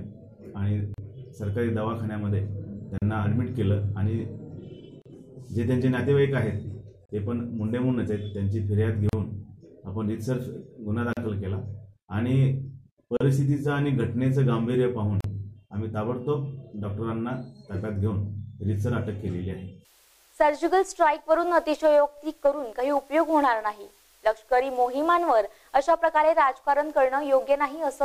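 Separately encoded pieces about 2 s long were joined with their encoder delay and padding left in, causing a gap at a join of encoded pieces: roughly 38 ms of soft-edged silence at 0.94, 2.98, 5.02, 7.06, 9.09, 11.13, 13.17 and 15.21 s.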